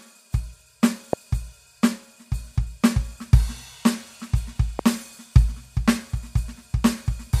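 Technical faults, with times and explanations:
1.13–1.15 s and 4.79–4.81 s, loud pop: single sharp pops about 15 dB then 10 dB above the music, which continues underneath, likely a voltage spike from a switch or static discharge.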